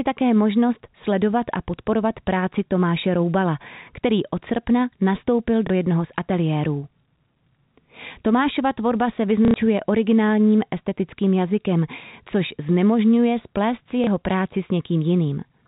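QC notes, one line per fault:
5.67–5.70 s, 9.45–9.54 s, 14.04–14.07 s: packet loss with last packet repeated. These are gaps of 30, 90 and 30 ms, just after "který od srpna nastoupil", "tvorba se" and "což znemožňuje splést si". Each gap is filled by replaying the last block received, which fits 30 ms packets. The 90 ms gap, three repeats in a row, gives a short robotic stutter buzzing near 33 Hz.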